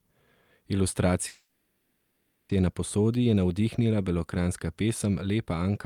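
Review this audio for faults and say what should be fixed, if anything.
From 1.27 s to 2.51 s the speech stops and the last sound is stretched into a fading buzz or hiss that never drops to true silence. This is a call audio freeze: packets were likely held up in transit, the jitter buffer ran dry, and the receiver filled the 1.22 s wait by continuing the previous sound. Nothing is lost; the speech resumes exactly where it stopped, now running 1.22 s late. To prevent it, fix the network path's delay spikes and allow the jitter buffer to adapt to them.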